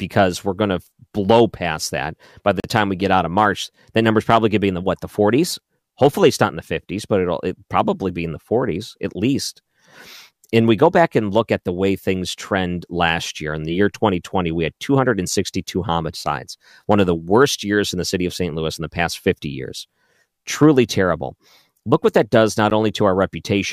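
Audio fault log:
2.60–2.64 s and 22.7 s: block of digital silence. The speech drops out for 40 ms, then 10 ms, with no fade.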